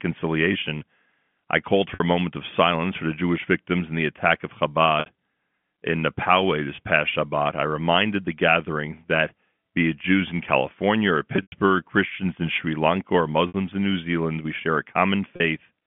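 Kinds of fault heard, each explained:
Packet loss with pitch repetition: at 1.94, 5.0, 6.76, 11.36, 13.48 and 15.36 s, 20 to 120 ms of speech is lost and the last pitch period repeats to bridge each gap, a brief buzzy hold. At 11.36 s it fades toward silence.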